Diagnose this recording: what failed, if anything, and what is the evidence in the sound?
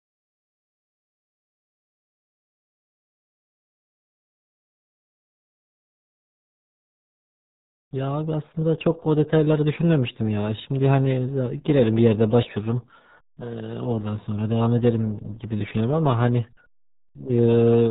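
The codec stage failed. For the whole clip the speech has the muffled, gargly quality of the RealAudio 14.4 codec. Nothing gets through above about 3.8 kHz, so the sibilants and the top of the voice are simply gone, and the codec damage is heavy. That fits a dial-up-era speech coder squeezing the signal into roughly 8 kbit/s.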